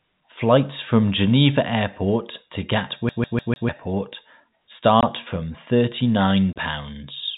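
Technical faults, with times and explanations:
3.09 to 3.69 s, CD stuck on one turn: the same slice of about 0.15 s of speech plays four times in a row, each pass broken by a brief mute as the player jumps back. A scratch at one point on the disc makes the laser lose tracking and fall back one track on every revolution, so it keeps rereading the same short stretch. The result is a fast, evenly spaced stutter with a mechanical regularity no speaker would produce.
5.01 to 5.03 s and 6.53 to 6.56 s, packet loss filled with silence: two dropouts cut holes into the speech, the first 20 ms long and the second 30 ms. Those lengths fit 10 ms packets going missing in short bursts. The receiver had nothing to play for those packets and inserted digital silence instead of concealing the gap. The sound stops abruptly and restarts abruptly.
6.2 s to the end, pre-emphasis left on: from this point the treble is lifted along the 75 µs FM curve, about 14 dB higher at 10 kHz than at 1 kHz. 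The boost was meant to be reversed by a matching de-emphasis cut at playback. That cut was never applied, so the tilt remains. The speech turns thin, glassy and overly bright, and the sibilants hiss and sting harder than in the earlier part of the clip.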